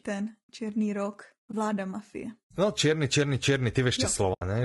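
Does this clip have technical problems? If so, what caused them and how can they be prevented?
Yes. Low-delay AAC compression is plainly audible throughout the speech: it has a rough, grainy texture, with noise filling the gaps between harmonics and a top band that sounds thinned or synthetic. This is likely from AAC-ELD, the low-delay codec used in video calls. Its short frames separate pitch harmonics poorly and spend more bits per second, and the damage here fits a low bitrate of around 32 kbps. To prevent it, raise the bitrate or use a longer-frame codec when low delay isn't needed.

AAC frame loss with muting occurs at 1.51 to 1.54 s and again at 4.33 to 4.42 s. Each is a muted gap: the sound fades out and back in because the decoder zeroes the missing spectrum and the overlapping windows smooth both edges. The first dropout is about 20 ms, a brief dip that fits a single lost frame. 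The second is about 80 ms, a soft-edged hole that fits four consecutive frames lost together. To prevent it, use a more reliable network path with forward error correction or packet loss concealment.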